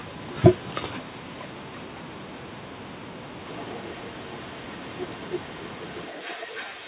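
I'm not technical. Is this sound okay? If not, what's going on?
No, there's an echo leak: a faint, delayed copy of the speech trails behind it, likely from a speakerphone whose echo cancelling let some sound slip back. It comes in short scraps from 0.00 to 0.37 s and 0.54 to 0.74 s, lagging about 374 ms, then runs continuously from 0.98 s to the end, lagging about 317 ms and a bit louder.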